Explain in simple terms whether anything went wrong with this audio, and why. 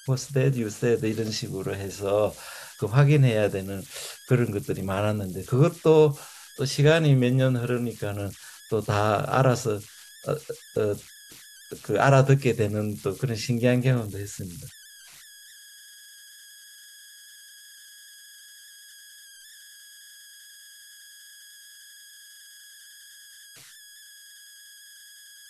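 Something did go wrong, and it runs through the whole speech recording: converter idle tones. When the talking drops away, you can pick out a high whistle, somewhere around 1.5 kHz, and under the quieter stretches there's a grainy texture. The converter that turned the sound into digital data wasn't adding the small random noise it needs, so with very little input it got stuck repeating the same bit patterns, and those repeats came out as that tone.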